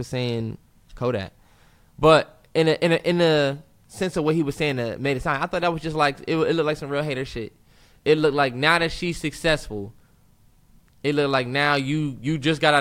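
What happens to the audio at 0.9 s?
Nothing goes wrong at 0.9 s: the speech runs through that moment intact, with no dropout, click, distortion or other fault.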